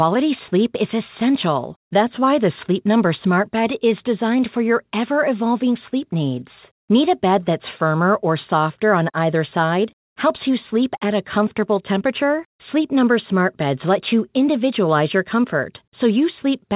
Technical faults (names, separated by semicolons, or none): none